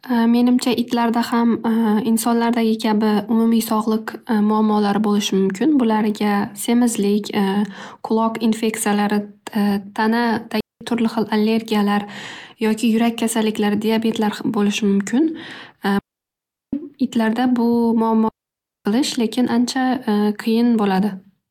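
Speech, hit by three digital wireless dropouts: clean near-silent holes at 10.61 s (0.2 s, before "turli xil allergiyalar"), 15.99 s (0.74 s) and 18.28 s (0.57 s), where the receiver muted after losing data.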